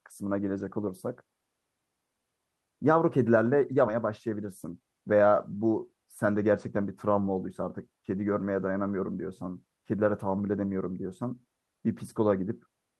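From 4.45 to 4.81 s the speech briefly hurries at unchanged pitch: a jitter buffer speed-up running about 9% fast, trimming roughly 40 ms of pitch periods.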